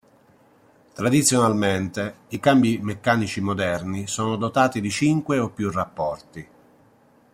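No technical faults detected.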